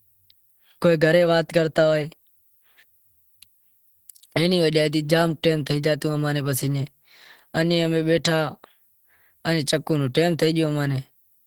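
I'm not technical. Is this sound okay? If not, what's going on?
No, not quite. All the way through, the speech has a muffled, hoarse, grainy edge, as if squeezed down to save space. That's most likely Opus compression, running at a low enough setting that its squeezing is plainly audible from start to finish.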